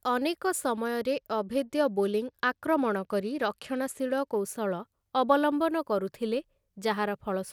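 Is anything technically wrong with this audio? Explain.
Yes. From 0.85 s to 4.39 s the speech turns dull and muffled, with the top end thinning out and a gritty, granular noise riding under the voice until the clarity returns. This is a Bluetooth SBC bit pool drop: the link came under pressure and the encoder cut its bit allocation, which fits a fall from a bit pool near 28 to around 13, roughly 102 kbps. Starved of bits, the upper sub-bands were dropped and the rest coarsely quantised.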